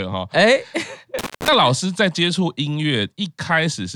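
A loose connection briefly opens between 1.19 and 1.48 s, an intermittent contact: the speech drops out for about 149 ms, crackling at each edge with faint hiss between.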